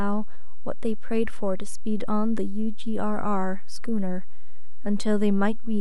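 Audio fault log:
Throughout: DC offset. The entire speech waveform rides on a constant shift away from zero, sitting at about -19 dBFS, so every sample is displaced by the same amount. The shift itself is inaudible because it carries no variation, but it shows up as a steady component at 0 Hz at the very bottom of the spectrum. It also eats into headroom on one side of the waveform, bringing peaks in that direction closer to clipping.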